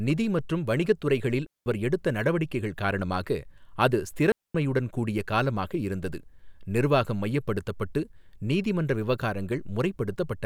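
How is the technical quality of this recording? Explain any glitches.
The recording has two brief gaps. Digital wireless dropout at 1.46–1.66 s and 4.32–4.55 s: the receiver lost too much data and muted for about 0.2 s each time, leaving clean near-silent holes without noise bursts.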